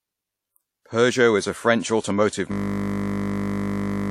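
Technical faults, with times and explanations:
Throughout: WMA compression, likely, with plainly audible ringing, washy smearing and hiss that breathes with the speech, fitting a low bitrate around 48 kbps.
2.52 s to end: system hang loop, a 20 ms slice repeating exactly, producing a steady 50 Hz buzz as the frozen system recycled the same buffer.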